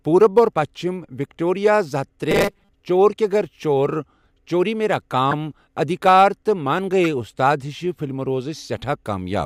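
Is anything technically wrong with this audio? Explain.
Yes. The speech has two kinds of technical fault.

Robotic sound from repeated short buffers runs from 2.31 to 2.70 s, between "زٕ ہتھ" and "چور کے گَر". The likely cause is audio arriving too slowly, so the playback side loops the last short stretch it has and skips ahead. The loop imposes a steady 200 Hz buzz, which fits a repeated segment of about 5 ms, and roughly half of that span is repeated material. The speech becomes a rigid, metallic drone that only loosely tracks the syllables.

Corrupt frame decoded occurs twice. At 5.31 to 5.33 s a damaged compressed frame was played as if valid, and at 7.04 s a second one lands just before "اُستاد ہِشہٕ فِلمہٕ". Each affects about a single frame. The flipped bits make the decoder place energy in the wrong frequency bands, so each frame comes out as a brief chirp or blip rather than speech. 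The first peaks at about -5 dBFS and the second at about -10 dBFS.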